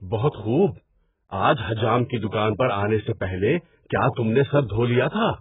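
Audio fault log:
throughout: AAC compression. The speech is dull and smeared, with heavy codec damage and nothing above 3.8 kHz. This likely comes from AAC-LC coding at a very low bitrate, which fits about 8 kbps. At that rate the encoder lowers its cut-off and quantises the remaining frequency lines coarsely against its hearing model, so detail blurs. On a spectrogram the energy stops at a flat ceiling near 3.8 kHz, with patchy gaps beneath it.
0.69–1.35 s: loudspeaker feedback squeal. A single tone at 6 kHz swells over roughly 0.4 s until it sits about 15 dB above the speech, then stops at 1.35 s. The microphone was picking up its own loudspeaker, and at that one frequency the loop gain exceeded one, so the tone kept growing. On a spectrogram it is one bright horizontal line. The waveform shows a rising envelope during the build-up.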